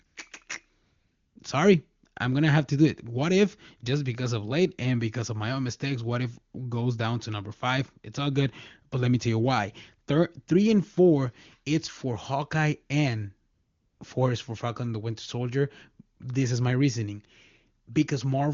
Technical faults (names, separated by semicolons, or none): AMR comfort noise